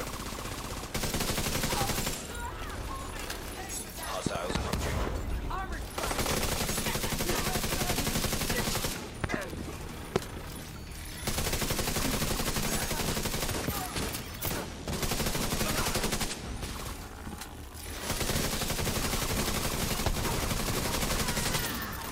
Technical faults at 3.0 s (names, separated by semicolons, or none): none